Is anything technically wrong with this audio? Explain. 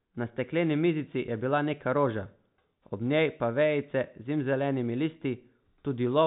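No, there are no technical faults.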